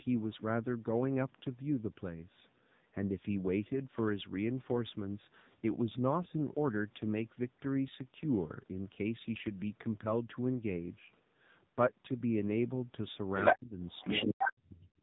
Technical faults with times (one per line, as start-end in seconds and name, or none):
0.00-15.02 AMR narrowband mobile codec
0.30-0.41 other side's voice leaking through
13.35-13.57 other side's voice leaking through
13.53-13.79 speech suppressed in double talk
13.86-14.53 other side's voice leaking through
14.18-14.98 speech suppressed in double talk